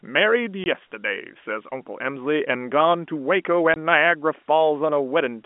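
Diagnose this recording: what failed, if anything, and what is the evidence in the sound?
Network stage: packet loss filled with silence. The speech drops out abruptly twice, from 0.64 to 0.66 s and again from 3.74 to 3.76 s. Each gap is 20 ms, which fits a single lost 20 ms packet, and both have hard edges where the waveform is cut to silence and resumes. The receiver inserted silence for the missing audio rather than concealing it, so the holes are clean and sharp. The G.711 telephone band around these gaps is intact.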